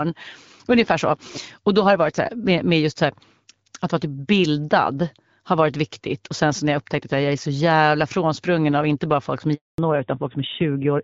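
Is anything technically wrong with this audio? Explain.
Yes, there are two faults near the end of the speech.

Handover gap, 9.54 to 9.78 s: while the call switched networks, no speech frames arrived for 240 ms. The sound fades within a few tens of milliseconds into silence, a flat, empty stretch on the waveform and a blank vertical band across the spectrogram.

Fallback to narrowband, 9.78 s to the end: after the switch the call drops from wideband HD Voice to an older narrowband codec, so nothing above 4 kHz survives. The speech turns duller and rougher, which fits a low narrowband rate around 7.4 kbit/s. On a spectrogram the energy above 4 kHz is cut off by a hard horizontal ceiling from that point on.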